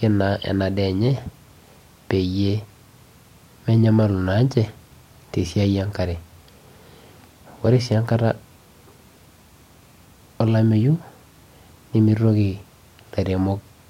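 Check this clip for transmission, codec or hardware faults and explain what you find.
Nothing stood out on listening to this speech recording that would point to a problem in how it was transmitted, encoded or captured.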